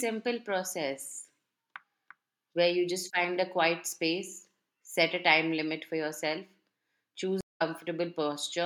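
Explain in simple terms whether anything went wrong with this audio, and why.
At 7.41 s the speech goes silent for 0.18 s. This is a stream reconnect: the connection dropped, then resumed slightly later, skipping a moment.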